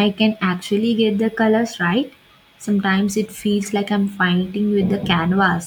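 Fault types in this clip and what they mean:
No faults detected.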